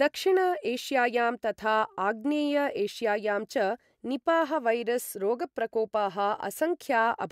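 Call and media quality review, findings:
No faults heard in clip.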